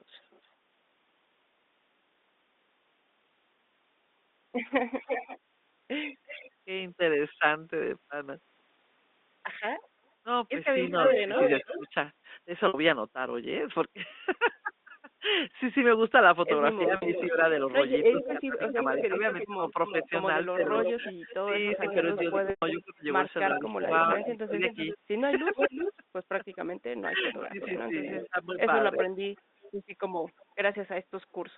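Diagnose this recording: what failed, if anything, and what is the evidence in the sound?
Echo leak, in call processing. A delayed copy of the speech returns about 0.35 s late at 0.2–0.48 s (faint), 4.96–6.51 s, 9.83–11.89 s (near speech level) and 17.14–30.43 s. Likely a far-end loudspeaker whose echo canceller let its microphone pickup through.

Speech suppressed in double talk, also call processing. During overlapping speech at 10.91–11.94 s and 16.85–29.06 s, the talker on the loudspeaker side dips and cuts out in pieces, by up to about 20 dB. The echo canceller likely could not separate the talker from the echo, so it attenuated both.

Packet loss with pitch repetition, on the network. Gaps at 12.68 s (60 ms), 16.96 s (60 ms), 22.5 s (120 ms) and 30.72 s (20 ms) are bridged by a repeated pitch period. The 20 ms one sounds held and buzzy. The longer gaps fade toward silence before the speech cross-fades back.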